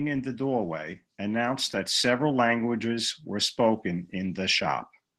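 Throughout, Opus voice compression is squeezing speech into very few bits, which fits about 16 kbps hybrid coding, leaving it hoarse, slightly robotic and plainly damaged.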